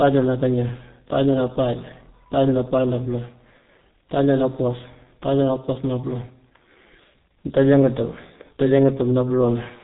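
Speech runs through the whole clip with heavy G.723.1 codec damage: it sounds muffled and hoarse, consonants smeared, with a slow-updating vocal model that fits a 6.3 kbit/s stream. A spectrogram shows nothing above 3.8 kHz, with coarse, blocky harmonics throughout.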